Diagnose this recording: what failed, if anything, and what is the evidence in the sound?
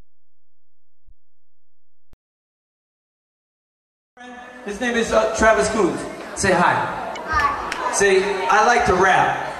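Damaged data in the compressed stream is what broke here, so it's a codec or storage problem. You get a short glitch at about 1.06 to 1.12 s and another at 7.12 to 7.18 s, each roughly 60 ms. The decoder hit corrupted frames, lost sync and garbled output until it locked onto a clean frame header again.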